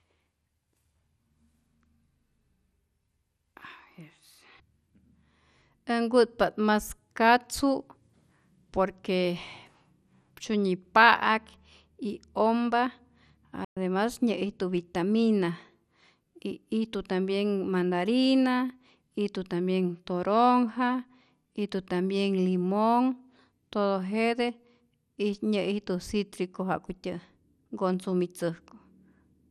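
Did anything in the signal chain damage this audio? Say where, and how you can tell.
Yes, two stages. The codec is the first: across the whole speech clip the sound is dull and grainy, with nothing above 14.4 kHz and a gurgling, granular edge. That points to MP2 compression, likely a low-rate encode, around 80 kbps. Layer II divides the spectrum into 32 sub-bands and hands out bits, and when the budget is tight the top bands get dropped while the rest are quantised coarsely, so they flicker and crunch.

The second is at playback: a playback stall from 13.64 to 13.77 s. The audio just stops cold mid-flow for about 120 ms, then picks up again with "nyä'ijtu vitamina". That's a clean gap, not a click or a repeated fragment, which fits the player running dry or its audio thread getting blocked, likely a buffer underrun. Output sat silent until data arrived again.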